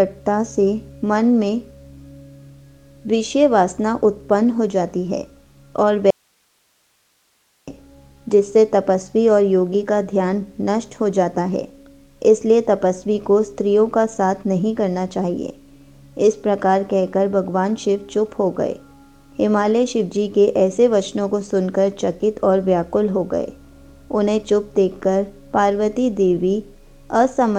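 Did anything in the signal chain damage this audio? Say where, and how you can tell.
Yes. There's an audio dropout to a faint residue from 6.11 to 7.67 s: the sound cuts off abruptly for about 1.6 s, leaving only hiss somewhere around 45 dB down. The path stayed live, so a likely cause is an intermittent analogue connection briefly losing the source.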